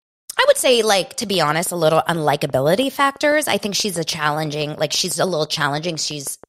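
From about 1.34 s right through to 6.45 s there's a train of clicks ticking over the speech, steady at roughly six per second, so around thirty in all. They're evenly spaced and much the same shape, with peaks about as loud as the speech itself, and they carry on through the gaps between phrases too. That regular pulse is likely interference from nearby equipment or a faulty connection or power supply injecting a spike on a fixed cycle.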